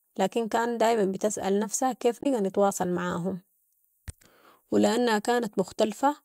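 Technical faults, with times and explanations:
2.20–2.26 s, damaged data in a compressed stream: after "كان دايما بتسأل نفسها", corrupted frames make the decoder lose sync, giving a brief blip before "نتواصل معاهم".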